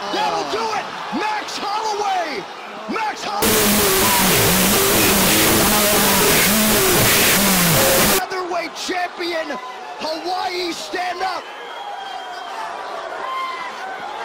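From 3.42 s to 8.19 s there is a wrong sample width fault: 16-bit integer audio is read back as unsigned 8-bit. Each original sample gets split into two separate values, so low and high bytes alternate as if they were consecutive samples. Only the high bytes carry the real waveform, and even then with a shifted zero point. The result is loud, harsh noise with the underlying sound faintly buried inside, running at half speed and an octave lower.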